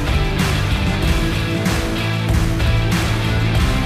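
The audio carries a doubled audio track from start to finish: a full-band copy trails the original by roughly 0.7 s at about 5 dB lower, with no decay or room colour. On a spectrogram every event reappears as a fainter, identical shape shifted right, and the waveform shows matching envelopes offset in time. The likely cause is the sound being captured a second time through a slower path.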